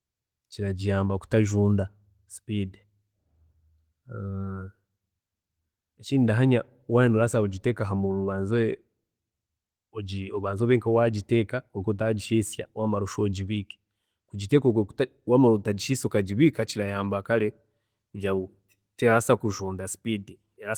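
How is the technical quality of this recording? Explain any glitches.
No faults can be heard in the recording: the Opus voice compression it has passed through leaves only light coding traces, and the audio keeps its full band up to about 20.2 kHz, which fits Opus in hybrid mode at around 20 kbps.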